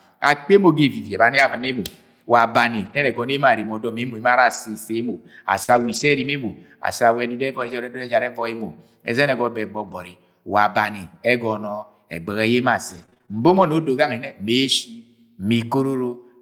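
Lost packets rebuilt from error correction affect this speech clip six times: 1.35 to 1.77 s, 2.77 to 3.19 s, 4.45 to 4.55 s, 5.68 to 6.30 s, 7.60 to 7.74 s and 9.80 to 9.94 s. The rebuilt stretches range from 60 ms to 320 ms. Each lost packet was replaced by the low-bitrate duplicate carried in the following packet, so there is no dropout, but those passages sound coarser and grainier than the surrounding speech. A short concealed packet loss occurs at 5.63 to 5.70 s, just before the longest rebuilt passage. About 40 ms of audio never arrived, and the receiver covered the hole by extending the preceding sound and then crossfading back into real audio. It is heard as a brief smear or wobble rather than silence, and a quick consonant there could be swallowed. Repeated packet loss produces a robotic sound from 12.90 to 13.64 s. Packets dropped out about half a dozen times in quick succession, the longest gap 24 ms, and together they cover about 120 ms. 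Each gap was patched by continuing the last sound, and the next followed before the decoder could settle. The result is a choppy stutter with fragments of speech missing.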